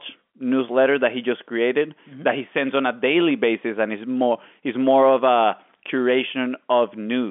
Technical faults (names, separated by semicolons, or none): none